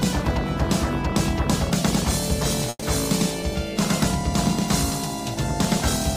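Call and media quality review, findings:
Call audio freeze, 2.69–2.84 s: last sound stretched into a fading buzz for about 130 ms, then about 30 ms of silence, then audio resumes exactly where it stopped. Likely jitter buffer underrun from delayed packets. Distinct from packet loss: nothing is skipped; the timeline is pushed back by 130 ms.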